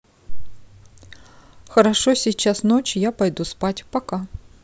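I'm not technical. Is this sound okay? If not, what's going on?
Yes, nothing in this recording sounds broken or faulty. There's no technical problem here that needs fixing.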